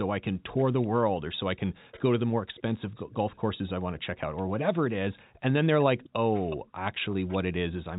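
At 0.57 to 0.87 s, 1.91 to 2.01 s, 2.56 to 4.02 s and 5.81 to 7.37 s, a faint delayed copy of the speech sits under the talker. This is echo leak. The copy trails by about 385 ms, and by about 366 ms in the last stretch. It is well below the main speech, quieter in some stretches than others. The likely cause is a far-end loudspeaker whose echo canceller let part of the microphone pickup through.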